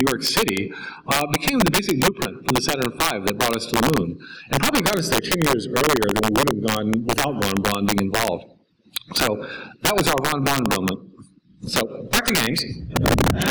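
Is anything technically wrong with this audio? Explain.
Yes. The audio has integer overflow throughout. The signal was driven about 6 dB past the integer limit, and instead of being clamped, each sample that exceeded the maximum wrapped around to the opposite extreme of the range. Around two percent of samples go over, so only the loudest peaks are affected. Each one flips sign across the full range, which is heard as sharp cracks on those peaks, more abrupt than ordinary clipping.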